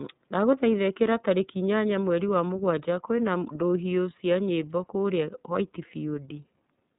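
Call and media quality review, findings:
iLBC codec, throughout: speech cut off near 3.8 kHz, plainly rough and synthetic from per-frame excitation coding without prior-frame reference, consistent with 30 ms frames around 13.3 kbps.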